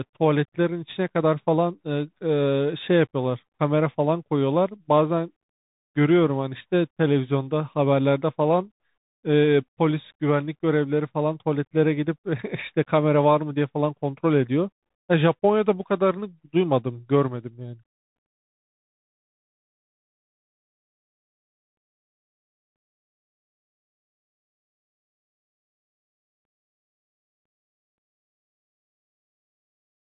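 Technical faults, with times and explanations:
Throughout: Bluetooth CVSD headset codec. Nothing above 3.8 kHz passes, and its one-bit adaptive stepping makes s sounds scratchy and leaves a granular hiss under the speech.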